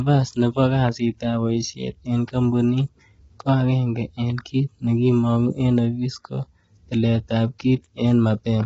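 From start to finish the speech sounds rough and grainy, with noise filling the gaps between harmonics and nothing above 7.8 kHz. That's likely low-delay AAC compression, AAC-ELD style, whose short frames smear pitch detail, and the heavy damage points to something near 16 kbps.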